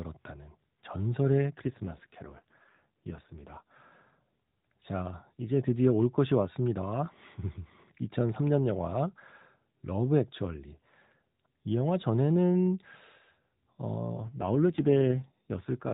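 From 1.6 to 3.72 s the speech turns rougher and buzzier, taking on a more synthetic edge before clearing again. The same roughening returns at 14.11 s and lasts to the end. Both are an AMR rate drop: the AMR narrowband mobile codec falls from a rate that fits 12.2 kbps to one that fits 5.9 kbps, giving bits to error protection, so the band stays unchanged and nothing cuts out.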